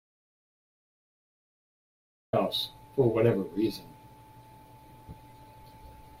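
From the very start until 2.33 s the clip is dead silent, an audio dropout to silence that is already under way when the recording begins. The gap is silent, with no room tone or hiss, so the input was likely disconnected or muted while the recorder kept writing. The speech then arrives abruptly mid-flow. On a waveform the opening is a flat line. On a spectrogram it is empty black until a hard vertical edge at 2.33 s.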